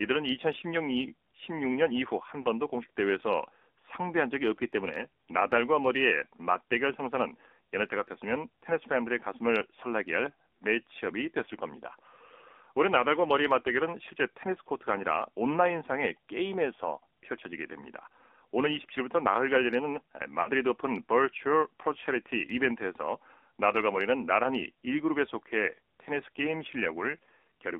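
Throughout, the speech sounds thin, buzzy and synthetic, confined to about 250 Hz to 3.6 kHz. This is the AMR narrowband mobile codec, and its plainly audible damage fits a low rate near 7.4 kbps. At 2.42 s a brief warbling dip of about 20 ms points to a single lost AMR speech frame, which the decoder concealed by repeating the previous frame's settings at reduced gain. At 20.42 s a 40 ms smear, twice as long, fits two lost frames in a row, so the sound stretches and weakens before recovering.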